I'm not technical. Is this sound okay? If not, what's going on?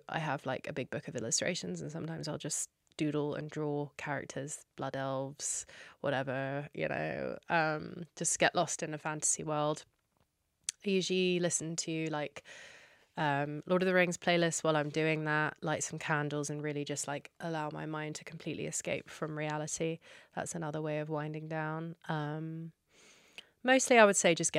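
Yes, nothing in this recording sounds wrong.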